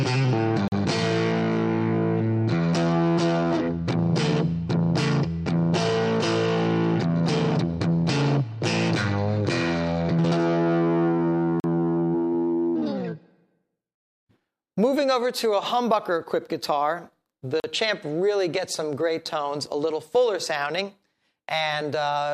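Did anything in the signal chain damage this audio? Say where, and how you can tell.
Yes. Blocks of digital silence at 0.68, 11.6 and 17.6 s, each 40 ms with hard edges, point to driver-buffer underruns, unlike smoothed-over packet loss.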